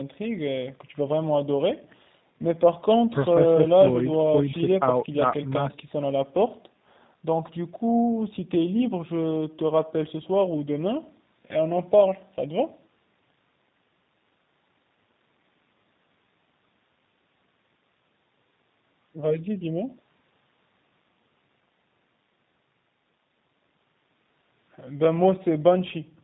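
Speech passed through a G.729 codec for its whole length, most likely G.729A at 8 kbit/s. The coder rebuilds each 10 ms frame from a modelled vocal tract and a few pulses, so nothing above 4 kHz remains and the voice sounds plainly rough and synthetic.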